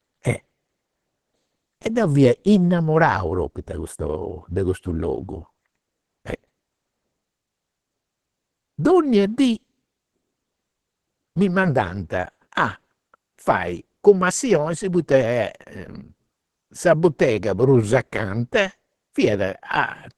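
Opus compression, throughout the clip: the speech sounds muffled and hoarse, with nothing above 12.1 kHz, which is likely the codec's hybrid speech mode at a low bitrate near 16 kbps, trimming bandwidth and thinning detail to fit.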